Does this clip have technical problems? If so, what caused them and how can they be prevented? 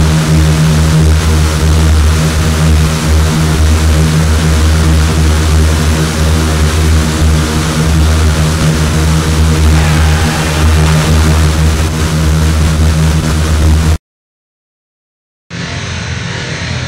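No, no technical faults are audible.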